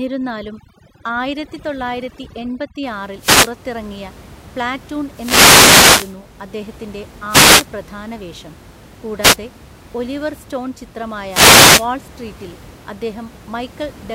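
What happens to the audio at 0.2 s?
Overdone noise removal runs from 0.0 to 2.83 s. An over-aggressive noise filter mutes bands near the room noise floor, leaving twinkling specks.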